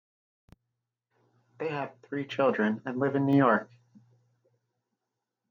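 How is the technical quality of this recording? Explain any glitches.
There's one clear glitch, at about 2.31 s, where the microphone volume steps up. The level jumps by about 7 dB in a single step, and the speech and the background noise both get louder at the same moment. That's the call software deciding the mic input was too quiet and turning up the device's input gain all at once instead of easing it up, so everything after that point sits noticeably hotter than before.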